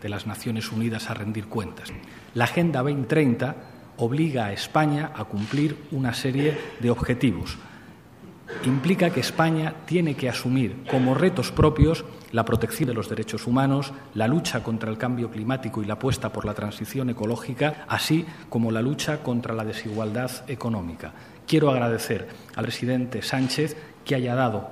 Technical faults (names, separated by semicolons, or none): audio missing between chunks